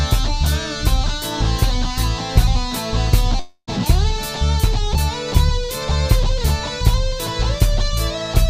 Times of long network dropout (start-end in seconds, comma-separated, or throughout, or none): 3.39-3.69